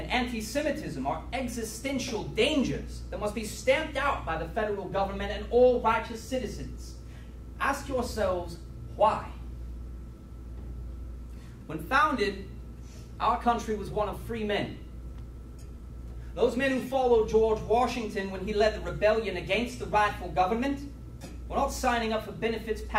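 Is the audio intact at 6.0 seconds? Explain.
Yes, at 6.0 seconds the audio plays through cleanly with no dropout, click, distortion or other fault.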